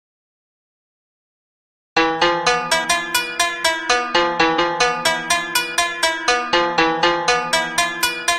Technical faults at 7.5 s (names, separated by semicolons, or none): none